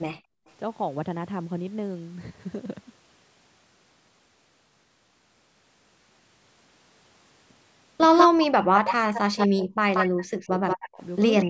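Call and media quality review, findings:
Background gated by the echo canceller, 0.16–0.46 s: room tone dips by about 40 dB for 0.3 s, then returns. Canceller clamped the microphone while the far-end loudspeaker played, pulling the background down with it.

Echo leak, 8.17–8.27, 8.87–9.47, 9.94–10.89 and 11.37–11.45 s: delayed copy of the speech trails it by 182 ms, about 5 dB below the speech, about 10 dB below in the last burst. Likely incomplete echo cancellation at the loudspeaker end returning residual playback.

Speech suppressed in double talk, 8.27–11.02 s and 11.45 s to the end: speech drops in pieces while both sides talk, around 40 dB deep over roughly 2 s, then a brief dip of around 20 dB. Canceller likely could not separate near-end talk from echo and attenuated both.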